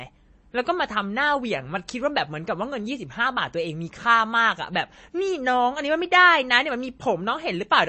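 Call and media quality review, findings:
MP3 compression artefacts, full length of speech clip. Nothing above 8.3 kHz, plainly audible watery swirl on sibilants, smeared onsets. Likely low-rate MP3 encode, consistent with about 32 kbps: treble lowpassed, weak spectral lines dropped and toggling frame to frame.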